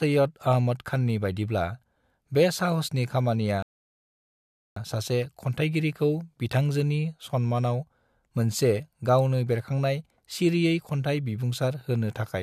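At 3.62 s, a rebuffering stall: the player exhausted its downloaded audio and halted, leaving silence until 4.77 s after "बे साहसनि खामानिया", then resuming intact with "सासे खन्थायगिरिखौ बिथांजोनि", adding 1.14 s.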